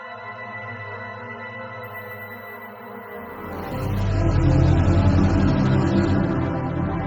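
From 1.84 to 4.00 s there is imaging from sample-and-hold upsampling. The fault fits a 16 kHz stream raised to 48 kHz by repeating samples without a smoothing filter. The result is a metallic fizz that follows the sound's level and sits about 22 dB below it. On a spectrogram, a mirrored copy fills 8 kHz to 16 kHz. The waveform looks like small staircases.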